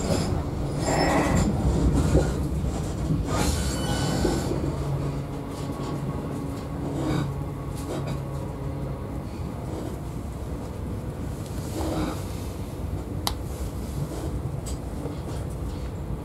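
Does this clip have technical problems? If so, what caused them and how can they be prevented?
No, nothing technical stands out here, so there's no problem to trace back or guard against.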